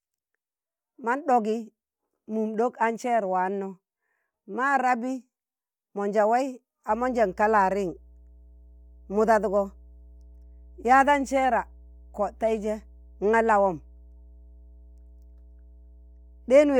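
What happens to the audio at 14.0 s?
At 14.0 s the speech sits on top of mains hum, a steady 60 Hz tone that starts at 6.90 s and continues to the end at 16.8 s. A ground loop or a nearby transformer is letting the power line leak into the signal, so a low, constant drone sits roughly 25 dB under the speech and is clearest in the pauses. On a spectrogram it shows as an unbroken horizontal line at 60 Hz. In the waveform it appears as a slow, regular ripple that stays between words.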